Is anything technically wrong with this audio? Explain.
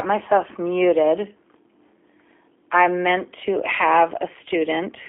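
Yes. Throughout, the speech has been carried by a G.729 codec, consistent with the 8 kbit/s G.729A variant. It rebuilds each 10 ms frame from a vocal-tract filter, a pitch predictor and a few pulses, inside a 300 Hz to 3.5 kHz band. The coding damage is plainly audible as a rough, synthetic, narrowband sound.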